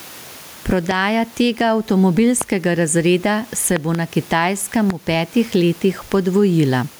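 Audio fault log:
throughout: gain pumping. The room noise, which sits about 33 dB below the speech, swells up in every pause and drops back as soon as a loud syllable arrives, with the level swinging by roughly 10 dB. This is likely input gain set far too high, with a fast limiter clamping each loud moment and releasing in the gaps. What marks it as pumping, and not a noisy room, is that the background moves with the speech, rising only when the talker stops, and that loud and soft syllables come out flattened toward one level.
0.91, 2.41, 3.76 to 3.97, 4.90: loud pop. Each is a sharp click or thump sitting on top of the speech, which carries on underneath without a gap. The ones at 0.91, 2.41 (just before "razreda se") and 4.90 are single pops. The event from 3.76 to 3.97 (just after "razreda se") is a pair. Peaks reach roughly 10 to 20 dB above the speech. The likely cause is a brief voltage spike from a connector, switch, static or driver, shaped by the circuitry that follows it. 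Unlike a dropout or a codec glitch, nothing is removed from the signal. The pop is added on top of the sound.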